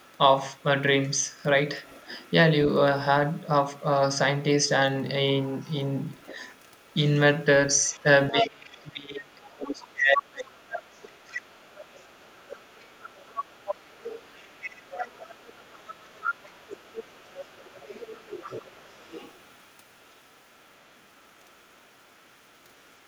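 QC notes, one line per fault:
0.00–2.32, 3.34–3.83 and 5.60 to the end: other side's voice leaking through. The echo canceller likely failed to remove the far end's loudspeaker sound from the microphone, so a second voice sits faintly under the speech, very quiet at first, then noticeably stronger from 5.60 onwards.
8.31–11.45 and 18.23–18.30: speech suppressed in double talk. With both sides talking at once, the canceller likely cannot separate its own talker from the echo and turns everything down. The speech dips deeply for about three seconds in the first run, then briefly and shallowly at 18.23.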